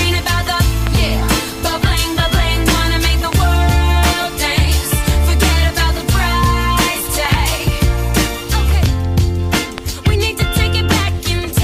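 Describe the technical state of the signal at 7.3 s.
At 7.3 s the signal carries a loud pop: two sharp pulses between 7.25 and 7.36 s, peaking roughly 15 dB above the surrounding sound, which continues underneath. The likely cause is a voltage step from a plug, switch or static discharge. On a waveform they appear as two tall spikes; on a spectrogram, as thin vertical broadband stripes.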